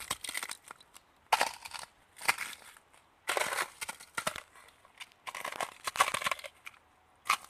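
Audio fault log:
4.24–6.14 s, buffer tearing: software writing and hardware reading the ring buffer have slipped out of step, so each 40 ms period holds a small slice of sound from around 70 ms earlier, hard-joined at both edges, causing a steady 25 Hz rattle while sound plays.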